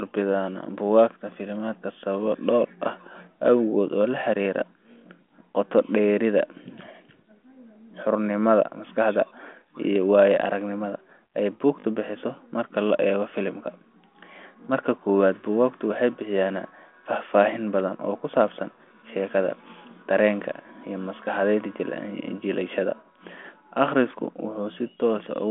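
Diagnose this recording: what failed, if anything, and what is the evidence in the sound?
A brief stutter at 11.8 to 11.84 s, the same 20 ms slice played twice more with hard joins: a repeated buffer at the driver stage, when fresh audio arrived late.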